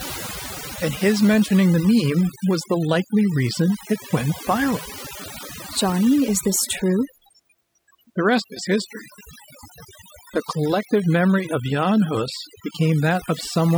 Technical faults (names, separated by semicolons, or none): overdone noise removal